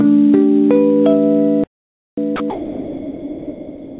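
At 1.64 s the everyday sound cuts off abruptly into dead digital silence, with no room tone at all, until it returns at 2.18 s, about 0.54 s lost. This audio dropout to silence is likely an input that briefly disconnected or muted while silence kept being written.

From 2.36 to 2.40 s, and again from 2.50 s through to the end, the sound gives way to flat, steady noise: a 40 ms gap, then a full 1.5 s. This is sound dropped by the voice detector, which likely misread the sound as background so the receiver filled in comfort noise. The whole clip stops at about 4 kHz, which points to a narrowband call codec such as G.711 mu-law.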